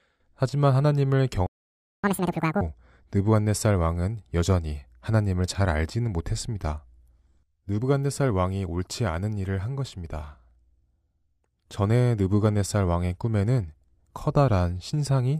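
Speech, broken by a playback stall at 1.47 s. The sound cuts to silence for 0.57 s, until 2.04 s, likely from the player running out of buffered data. Catch-up at higher speed follows from 2.04 to 2.61 s. The speech plays at double speed, raised about 10 semitones in pitch, then drops back to normal.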